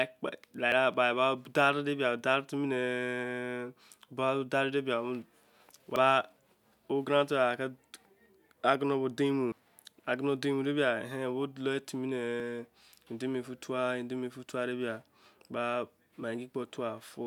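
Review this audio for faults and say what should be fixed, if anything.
Dropped buffers (overruns) at 0.72, 5.96, 9.52 and 12.4 s: the speech jumps ahead each time, losing roughly 40 ms at the first, around 70 ms at 9.52 s and about a tenth of a second at the other two, likely because the recording software read its buffer too late. Prevent it by giving the capture thread higher priority or a larger input buffer.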